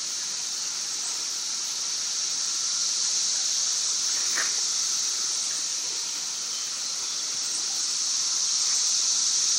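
A recording of everyday sound with one brief chunks-out-of-order fault between 7.77 and 7.79 s. A single block of about 5.8 ms was delivered or written three chunks late, so it plays after material that should follow it. No audio is lost, but the sequence is scrambled. The result is a short jumbled flicker, with three hard joins where mismatched waveform edges meet.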